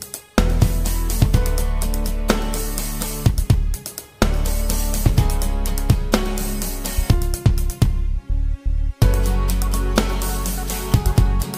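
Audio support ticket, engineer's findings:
Single skip at 5.06 s. The sound jumps forward with no gap. Likely a dropped buffer (overrun) in the capture path: samples were overwritten before the application read them, so the two sides are spliced directly. The lost span is tiny, roughly a millisecond or two.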